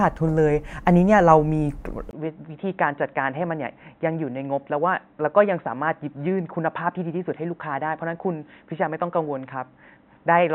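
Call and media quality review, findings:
Speech turns dull and narrow from 2.11 s to end, with a 20 ms dropout at the switch. Nothing above 3.9 kHz, about 5 dB quieter, faint new noise floor. Input switched to a poorer device, likely a headset call profile.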